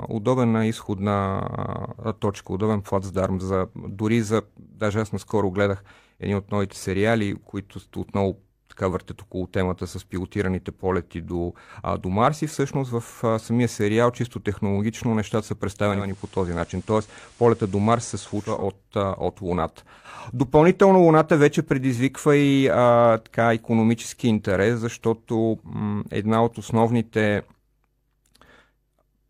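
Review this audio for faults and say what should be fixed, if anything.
Digital radio blending to analogue occurs from 15.88 s to 18.67 s: the receiver lost its digital stream and cross-faded over about 341 ms to the station's FM broadcast, then returned. During that stretch the level drops by about 1 dB and a hiss of the kind FM reception adds sits roughly 30 dB under the speech. Unlike a dropout or a hard switch between sources, the speech carries on through a gradual fade with the added hiss. To prevent it, record from a stronger digital signal or a direct digital feed so the receiver never falls back to FM.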